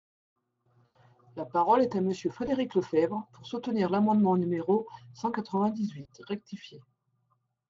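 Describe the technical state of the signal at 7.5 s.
At 7.5 s the speech has channel delay comb filtering, from 5.57 s to the end: one channel lags about 5 ms, so the mono sum notches evenly from roughly 100 Hz, sounding hollow and phasey.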